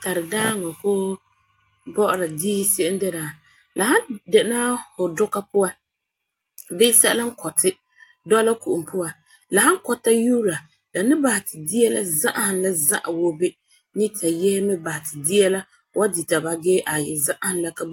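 No technical faults heard.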